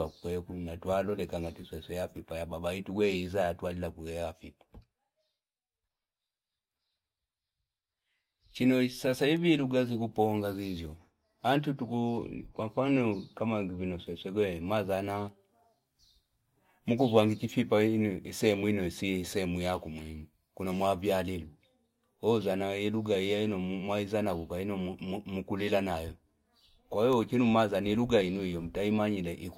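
No technical faults are audible.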